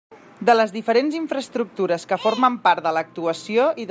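No technical faults can be heard anywhere in the speech recording, and the signal holds steady throughout.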